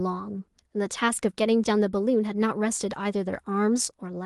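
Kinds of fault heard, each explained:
Nothing's gone wrong here, and the speech comes across like any ordinary call, with the top end stopping around 12 kHz as the call path's codec sets it.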